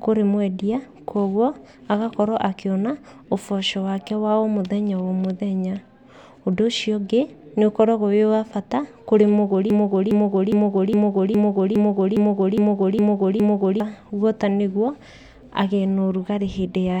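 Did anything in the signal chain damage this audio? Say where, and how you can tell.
Yes: a broken-record loop, likely a stalled playback buffer resending its last fragment. After "wa bata kũrĩ mũgũri", a 0.41 s piece repeats ten times from 9.70 to 13.80 s.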